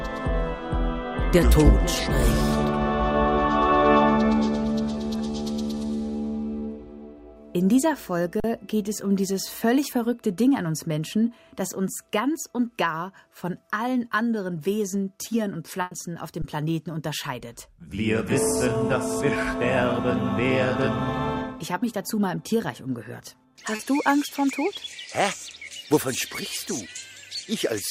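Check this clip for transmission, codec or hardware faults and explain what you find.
I hear three kinds of fault here, two of them transmission problems and one on the playback side.

At 8.40 to 8.44 s and again at 16.42 to 16.44 s there's an underrun with held sample. The output buffer ran dry for 40 ms and then 20 ms, and the converter just sat on its last value. The waveform goes flat and the sound drops out without a hard click. Nothing was skipped, so playback picks up right where it paused and the restart is fairly soft.

From 15.81 to 15.93 s there's a burst of packet loss. About 100 ms of audio didn't arrive in time, and the receiver covered the gap by stretching the last sound and letting it fade. You get a held buzz or a dying hiss. When the real signal comes back it has jumped forward, because the 100 ms in between is gone.

At 23.75 to 23.81 s there's a short concealed packet loss. 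Roughly 40 ms never reached the decoder, and the receiver patched it by continuing the previous sound and blending back in. It's brief, more a little smear or wobble than a gap, and any short transient in that window can disappear entirely.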